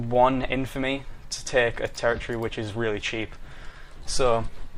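Throughout the clip there is clock drift between sender and receiver. The sending clock runs about 4 percent slow relative to the receiver, so the jitter buffer keeps draining faster than it is refilled. The receiver has to stretch what it gets to stay in step. This gives the sound a faintly dragged, unsteady pace rather than one clean event. On a spectrogram there is no single mark, only a slight overall slackening of timing.

From 0.04 s to 4.51 s, repeated timing corrections are the audible side of that drift. The receiver repeatedly inserts short duplicated slices, all lengthening the signal, so the stretch plays at about 96 percent speed and gains roughly a seventh of a second in total. The inserts fall at uneven intervals and come across as small hiccups and a wobbling tempo. A waveform shows brief repeated segments at the splice points, and a spectrogram shows faint vertical seams where content repeats.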